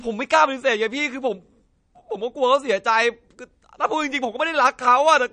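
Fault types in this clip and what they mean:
MP3 compression: The treble stops dead at 9.6 kHz for the whole clip, so the top of the speech sounds dull and boxed. The damage is plainly audible. Quiet frequency details flicker in and out between frames, giving a watery, swirling texture, and s sounds turn thin and metallic. This points to lossy coding starved of bits, which fits a bitrate around 40 kbps. The likely cause is a low-rate MP3 encode.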